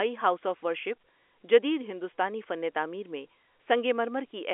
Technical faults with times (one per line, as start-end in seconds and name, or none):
none